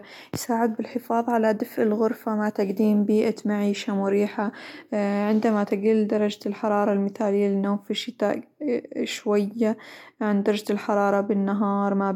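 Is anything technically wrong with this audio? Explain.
No, nothing technically wrong is audible in this speech.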